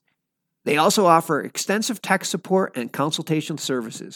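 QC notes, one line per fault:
No technical faults are audible anywhere in the signal.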